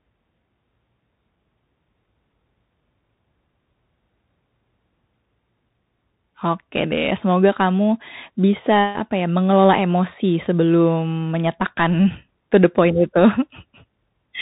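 Speech runs the whole clip with a dull, boxed-in tone: nothing above about 3.8 kHz survives, s sounds come through scratchy, loud high-energy moments break into harsh distortion, and a grainy hiss sits underneath. That is the Bluetooth CVSD headset codec, which fits a 64 kbps stream where each sample is a single up-or-down bit. The adaptive step cannot track fast, loud changes, so peaks overload and quiet passages carry that granular noise.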